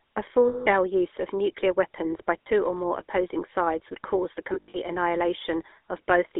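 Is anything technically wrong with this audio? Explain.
Yes. The whole clip shows GSM full-rate codec damage: speech confined to about 250 Hz to 3.6 kHz, buzzy and gravelly from coarse pulse excitation. A spectrogram shows a hard band edge and grainy harmonics.

Lost GSM frames occur at 0.48–0.67 s, 2.42–2.47 s, and in scattered runs of up to about 70 ms across 4.54–4.79 s. Concealment repeats the last good frame, so the sound freezes into a rough, metallic ring. These show as smeared, frozen spectral bands.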